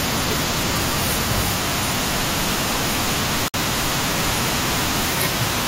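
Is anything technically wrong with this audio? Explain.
Yes. There is a gap at a join of encoded pieces from 3.48 to 3.54 s. The speech drops out in a gap of about 58 ms with smeared edges, so the silent part is shorter, then resumes where it stopped. Separately encoded pieces, joined every 4 s, kept their untrimmed start delay and end padding.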